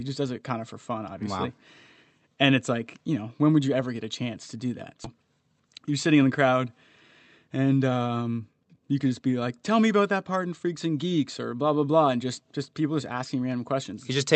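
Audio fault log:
5.04 s, skip ahead: playback jumps straight past about a fifth of a second of speech with no fill at all, so the two sides butt together. That stretch was dropped on the way or by the buffer while later audio was already queued.
5.60–6.23 s, jitter buffer speed-up: the buffer was still holding more than it wanted, so it shaved out tiny pitch-period slices, roughly 50 ms in total, running at 108% speed. Pitch stays put, but the speech sounds briefly rushed through the Opus call path, which is band-limited to 8 kHz.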